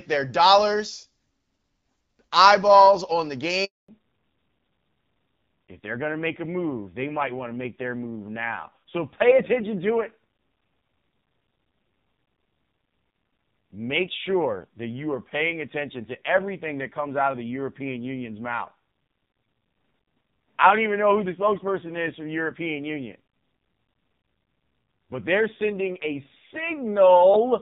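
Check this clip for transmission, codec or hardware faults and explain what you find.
Two faults show up, both at the same moment in the call.

At 3.64 s, right after "eyeballs on the", there is a handover gap. The phone switched the call between networks, and no speech frames got through while the new link was being set up. The audio fades out almost instantly and stays silent for 240 ms, until 3.88 s. Whatever was said in that window is simply gone, not muffled or garbled.

From 3.88 s to the end, the call shows a fallback to narrowband. The call dropped from HD Voice, moving from the AMR wideband codec to the older narrowband AMR codec. Before the switch, the wideband audio has only light codec colouring, consistent with about 12.65 kbit/s. After it, nothing remains above 4 kHz. The sound loses its crispness and sibilant detail and turns dull and rougher, which fits a low narrowband rate of around 5.9 kbit/s.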